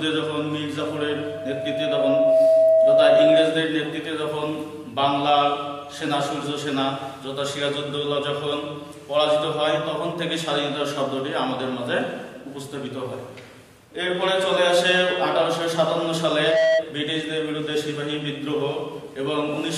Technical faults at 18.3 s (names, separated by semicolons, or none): none